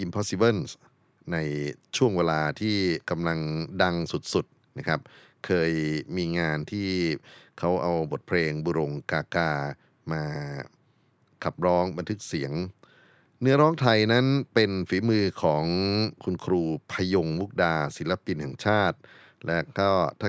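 No technical faults can be heard anywhere in this speech recording.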